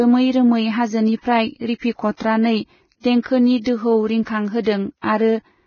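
Throughout, the speech is dull above 6.6 kHz with hissy, grainy treble, likely heavy Vorbis compression at a very low bitrate; noise-like grain, not warbling, separates it from MP3.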